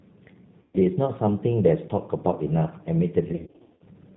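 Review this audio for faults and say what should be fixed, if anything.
The whole thing runs through a G.729 codec, and the damage is plainly audible. The speech has that slightly rough, synthetic edge, and nothing above 4 kHz survives. That's because the decoder rebuilds each 10 ms frame from a vocal tract filter, a pitch predictor and a handful of pulses rather than the real waveform. It all fits an 8 kbit/s stream. If you can, carry this over a wideband or higher-bitrate codec instead.

There's also VoIP packet loss concealed by the speech codec, twice. The first runs from 0.62 to 0.77 s, where about 120 ms of audio goes missing. The second, from 3.32 to 3.84 s, is worse. About 320 ms is lost in bursts across roughly 480 ms, and the longest single gap is 90 ms. In those spots the decoder keeps extending its last pitch and filter at falling gain, so you get a buzzy or noisy, fading smear. 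It stays weak for a moment after packets return because each frame builds on the last. A properly sized jitter buffer, plus FEC or redundancy on a less lossy path, would prevent this.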